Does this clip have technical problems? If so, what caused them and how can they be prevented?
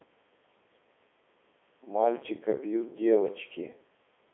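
Yes. The entire speech clip passed through a Codec 2 vocoder, and the damage is heavy. The encoder transmits no waveform, only pitch, voicing, energy and a coarse spectral envelope, and the decoder then rebuilds the voice from sine waves. The result sounds robotic and buzzy throughout. The band runs from roughly 250 Hz to 3.5 kHz, with nothing above 3.8 kHz, and the sound quality fits Codec 2's top 3.2 kbit/s mode. To prevent this, record or route the audio over a path that uses a waveform codec at an adequate bitrate instead of a low-rate digital-radio vocoder.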